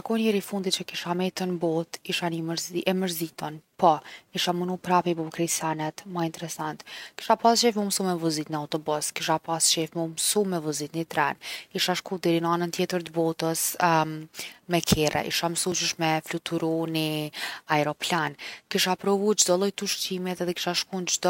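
A speech clip with a brief skip at 15.72 s, where the sound jumps forward by a few milliseconds with no gap of silence. This is likely a dropped buffer (overrun): samples were overwritten before the program read them, so the surrounding audio was spliced directly together.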